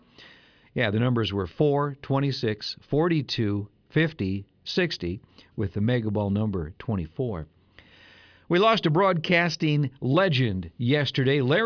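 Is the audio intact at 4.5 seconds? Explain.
Yes, at 4.5 seconds the speech plays through cleanly, with no dropout, click, distortion or other fault audible at that moment.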